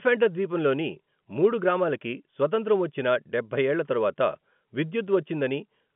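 Telephone-band speech over G.711 A-law at 64 kbps, confined to the 150 Hz to 3.4 kHz line band with nothing above 4 kHz; no technical fault to report.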